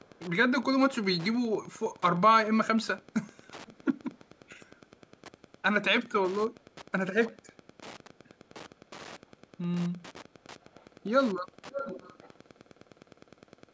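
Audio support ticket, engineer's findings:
Wi-Fi interference: nearby Wi-Fi radio coupling into the audio circuit, beacon bursts rectified. Steady tick every 102.4 ms, about ten a second, for the whole clip, roughly 25 dB under the speech. Call mic processing band-limits the audio at 8 kHz, as expected.

Echo leak: far end likely on loudspeaker, canceller not removing all of the mic pickup. Faint delayed speech copy at 0.01–0.2, 3.02–3.48, 3.66–3.98, 4.14–4.77, 6.60–6.64, 9.19–9.32, 10.61–11.1 and 11.42–13.72 s. Delay grows from 461 to 565 ms. The last stretch is much stronger, only about 15 dB down.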